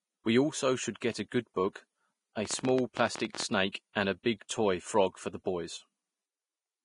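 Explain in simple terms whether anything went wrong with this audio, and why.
Yes, several things went wrong. Vorbis compression was likely applied at low quality, removing everything above about 10.6 kHz and coarsely approximating the treble, so the speech sounds heavily hissy, grainy and dull.

Pre-echo occurs when the codec spreads its noise across a whole block, so a brief hiss leaks in just before a sharp sound: at 1.00 s before "get a good book", from 3.72 to 3.74 s before "and a", and at 4.48 s before "toy frog for the".

A train of clicks, likely from electrical interference or a faulty connection, adds around fifteen unevenly spaced ticks, about 16 per second, from 2.45 to 3.44 s.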